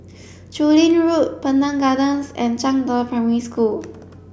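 No technical faults can be heard.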